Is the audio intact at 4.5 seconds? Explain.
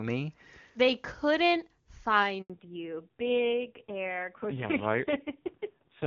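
No. At 4.5 s you're inside a fallback to narrowband that starts at 2.50 s and runs to the end. Before that the HD Voice path sounds clean, but from 2.50 s the call drops to an older narrowband codec, so nothing above 4 kHz gets through. The voice turns duller and rougher, which fits a low-rate AMR narrowband mode around 5.9 kbit/s.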